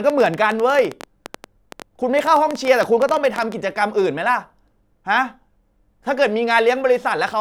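From 0.10 s to 3.53 s a train of clicks runs over the speech: around forty near-identical pulses at roughly 10.8 per second, spaced unevenly, with peaks reaching about 10 dB above the speech itself. The likely cause is interference from nearby equipment or a faulty connection or power supply. The clicks share one shape and keep ticking through pauses, which sets them apart from random crackle or dropout gaps that follow the signal.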